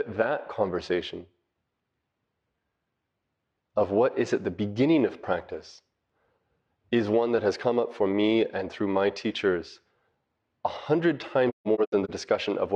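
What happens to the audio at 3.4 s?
Nothing goes wrong at 3.4 s; the speech runs through that moment intact, with no dropout, click, distortion or level change.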